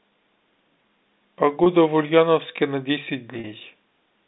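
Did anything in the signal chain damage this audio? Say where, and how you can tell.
Yes, at the network stage. Packet loss with pitch repetition shows up twice. From 1.64 to 1.66 s the speech briefly holds on one slightly buzzy pitch, about 20 ms long. From 3.40 to 3.44 s the same frozen buzz lasts about 40 ms. The lengths fit one and then two lost 20 ms packets. The receiver bridged each gap by repeating the last pitch period, then cross-faded back into the speech. The narrow G.711 telephone band carries on underneath.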